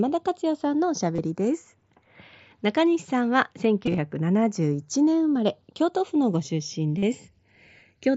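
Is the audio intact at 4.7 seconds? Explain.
No. Channels drifting apart runs throughout, including 4.7 s. Separate clocks about 100 ppm apart slide the inter-channel delay toward half a millisecond, sweeping comb notches into slow flanging.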